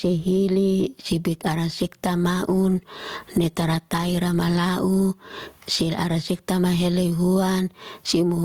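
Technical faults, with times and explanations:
Throughout, gain pumping: the level swings by around 20 dB. Loud and quiet passages sit unnaturally close together and the speech sounds squashed. This is likely from input gain set far too high for the microphone, with a fast limiter or compressor clamping down on every peak and releasing in the pauses.
2.18 to 4.69 s, call bitrate drop: just after "sibik ara sekta" the speech turns rougher, staying at its worst for about 2.4 s before clearing. The change in texture points to the encoder falling from roughly 32 kbps to about 18 kbps after the call's bandwidth estimate dropped. With fewer bits per frame, Opus quantises the spectrum more coarsely, and that produces the grainy, smeared quality until the rate recovers.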